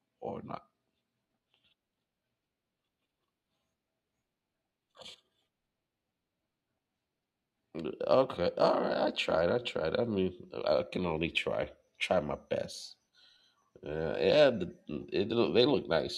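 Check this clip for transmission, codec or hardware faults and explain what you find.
One fault is present in the speech: a dropped-samples event at 9.39 s. The cause is likely a single sample, a tiny fraction of a millisecond, missing from the stream, so the waveform steps abruptly from one value to a later one with no transition. Far too brief to remove any audible sound, the discontinuity is heard as one sharp, isolated click and shows as a thin vertical line across the spectrum.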